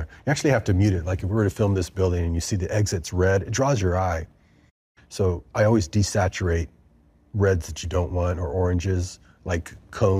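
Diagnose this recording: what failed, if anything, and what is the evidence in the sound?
Nothing failed; no stage shows any audible fault.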